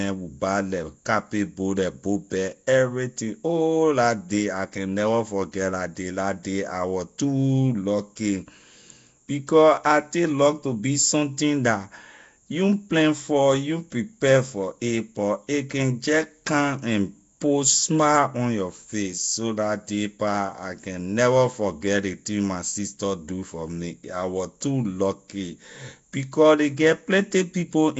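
From start to finish the speech carries a rough, hissy halo and a smeared, underwater quality, with nothing above about 7.7 kHz. That's likely Nellymoser compression: starved bands get filled with noise instead of real detail, which fits a low rate around 32 kbps.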